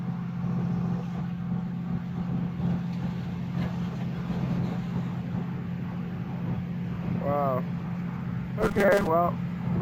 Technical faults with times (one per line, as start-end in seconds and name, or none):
1.16-1.22 compressed frames skipped
2.56-2.61 compressed frames skipped
3.90-3.96 compressed frames skipped
5.16-5.21 compressed frames skipped
6.41-6.45 compressed frames skipped
7.81-7.85 compressed frames skipped
8.62-9.07 robotic sound from repeated short buffers